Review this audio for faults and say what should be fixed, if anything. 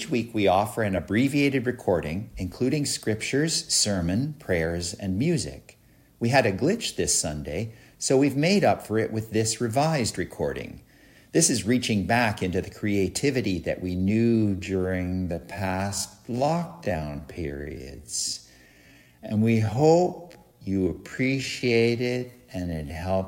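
From 13.96 s to the end at 23.27 s there's a time-stretched section: the pace drops abruptly to about 0.57x while pitch holds, so it drags, likely from software repeating short slices to pad the length. Fix it by re-editing or re-recording to fit instead of stretching that far.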